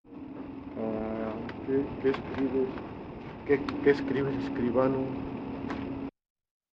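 No technical faults can be heard anywhere in this audio.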